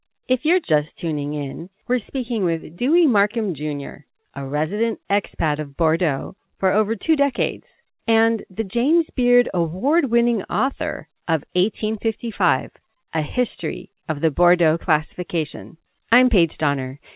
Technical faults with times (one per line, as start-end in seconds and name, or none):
none